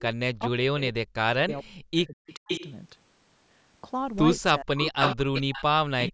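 From 0.34 to 2.5 s the speech dips and breaks up, falling by as much as about 40 dB, for roughly two seconds in total. This is speech suppressed in double talk, likely because the echo canceller, hearing both ends active at once, could not tell the near talker from loudspeaker echo and attenuated everything. The same pumping, gapped sound returns from 4.55 to 6.13 s, affecting about a second of that stretch.

Overlapping these, an echo leak brings back delayed copies of the speech. At 1.49 to 1.61 s and 1.97 to 2.04 s the copy trails by 435 ms and sits about 20 to 25 dB down. From 2.3 to 2.73 s it trails by 504 ms at only about 5 dB below the speech. The 504 ms copy recurs at 4.82 to 5.16 s, roughly as loud as the speech itself, then at 5.34 to 5.63 s (about 10 dB down) and 6.01 to 6.11 s (about 15 dB down). The likely cause is a loudspeaker on one side whose canceller failed to remove what its microphone picked up. 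The copies come through the same call path, which has nothing above 8 kHz.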